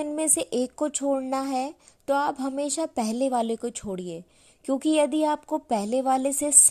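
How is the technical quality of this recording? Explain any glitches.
No technical glitches can be heard anywhere in this speech recording. There is nothing in the audio that calls for an explanation.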